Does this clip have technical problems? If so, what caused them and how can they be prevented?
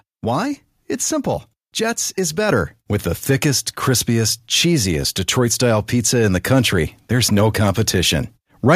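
Yes. At 2.49 s the call software judged the microphone too quiet and raised the device's input volume in one step, a microphone volume stepped up fault. Speech and background noise jump up together by about 4 dB. Disabling automatic microphone level adjustment in the call software prevents this.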